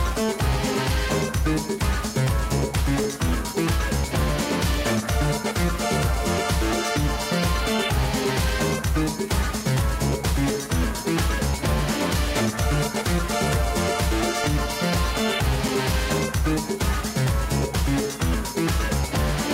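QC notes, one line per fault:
2.54–4.28 s, CD scratch ticks: eight short, evenly spaced ticks, about four or five a second, none longer than a few milliseconds. A scratch corrupts more data than error correction can rebuild on each disc revolution, so the player conceals those samples.
14.44–16.42 s, CD scratch ticks: nine regular ticks at roughly the same rate, each only a few milliseconds long. The damaged spot returns once per rotation, and the player interpolates or mutes samples its error correction cannot recover.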